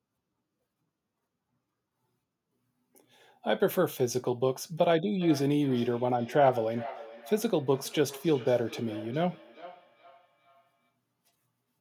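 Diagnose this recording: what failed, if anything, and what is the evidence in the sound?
Feedback echo between two devices, 5.11 to 10.94 s, call processing: a second device's playback re-enters the microphone unremoved by the local canceller, returning roughly every 0.4 s.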